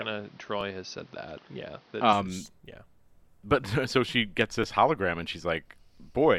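Speech opens with a narrowed, boxier sound up to 2.13 s, most likely because the input switched to a poorer device. A spectrogram shows nothing above 6.2 kHz there, a noise floor roughly 35 dB under the signal, and a level step of around 5 dB when the fuller sound returns, with no gap at the switch. Overlapping chunks cause a brief click-stutter once per second, at 0.61, 1.62, 2.62, 3.63, 4.64 (between "so she gets" and "hologram and") and 5.64 s (just after "hologram and"). At each join 6.5 ms of audio repeats, which shows up as a small waveform discontinuity and a thin vertical line on the spectrogram.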